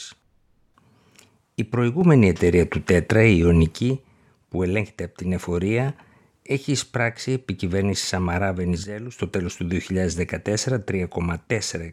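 A speech recording with two sudden gain jumps, likely digital gain applied without a ramp: level and background noise leap up about 6 dB from 2.01 to 3.78 s, then drop about 11 dB from 8.84 to 9.19 s, just before "τέλος του".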